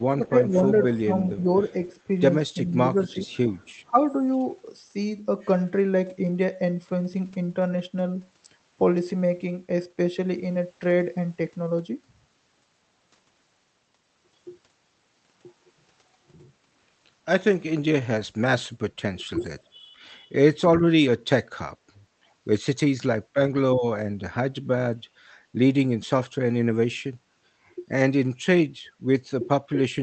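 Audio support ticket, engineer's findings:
Speech suppressed in double talk, 0.19–4.42 s: level dips of about 10 dB, around a second and a half in total, in pieces. Likely the echo canceller failing to separate near talker from loudspeaker echo and attenuating both.

Speech suppressed in double talk, 18.86–19.4 s: brief cut-out, about 35 dB down, a few tenths of a second in total. Likely the same canceller mechanism.

Speech suppressed in double talk, 24.45 s to end of clip: suppression reaching about 35 dB. Likely the same mechanism.

Echo leak, 0.85–3.72 s: a delayed copy of the speech trailing by 395 ms at about 25 dB below the direct speech. Likely residual echo that the far-end loudspeaker canceller missed, returned down the line.

Echo leak, 19.4–19.46 s: short scrap of returned speech, 420 ms delay, about 30 dB under the speech. Likely the same residual-echo path, immediately after the suppression above.

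Background gated by the echo canceller, 25.06–25.17 s: room tone drops by about 9 dB for roughly a tenth of a second, then returns. Canceller clamping the mic while the loudspeaker is active, then releasing. The codec band limit is 8 kHz.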